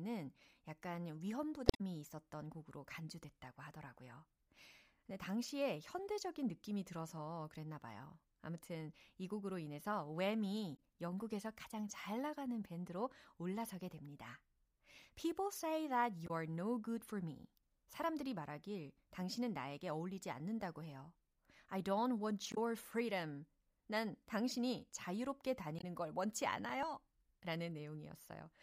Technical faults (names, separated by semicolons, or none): damaged data in a compressed stream; dropped buffer (overrun)